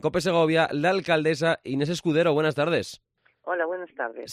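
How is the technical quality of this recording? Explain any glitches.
No glitches turn up anywhere in the recording, and there is no fault to explain.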